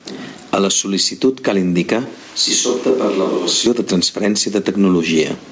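Gain pumping runs throughout, likely from a fast limiter or compressor clamping down on input gain set far too high, with a gain swing of around 15 dB.

Just after "cal indicar", from 2.06 to 3.66 s, the close microphone likely dropped out and a more distant one took over. The sound abruptly turns hollow and roomy, roughly 10 dB quieter, with room noise only about 25 dB below the speech. It then snaps back. Throughout, the G.722 call path leaves nothing above 8 kHz.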